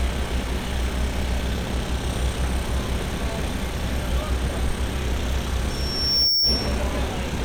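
From 5.69 to 6.80 s a loudspeaker feedback squeal rises at 5.5 kHz. The microphone re-amplifies its own loudspeaker until that frequency runs away, swelling over most of a second to a few decibels above the sound. That self-building growth separates it from a steady interfering whistle.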